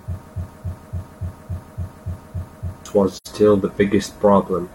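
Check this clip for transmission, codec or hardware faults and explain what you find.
Two faults are present, both in the first 3.3 seconds of this speech clip.

From 0.34 to 2.86 s there is a broken-record loop. A 0.28 s fragment repeats exactly, back to back, nine times. The cause is likely a stalled player, encoder or stream resending its last buffer. The speech that belonged there is missing.

From 3.16 to 3.27 s there is AAC frame loss with muting. About 85 ms of sound drops out, which fits two lost AAC frames. The decoder zeroed their spectrum, so the overlapping windows fade the sound out and back in around a soft-edged gap.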